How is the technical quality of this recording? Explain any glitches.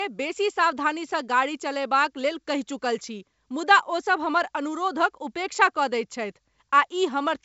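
No glitches or faults can be heard here.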